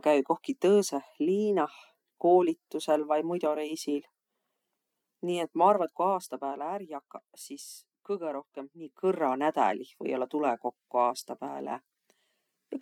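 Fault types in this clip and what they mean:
Zipper noise: gain stepped without smoothing, roughly fifty steps a second, leaving a fine ticking during the cut of about 10 dB and the restore.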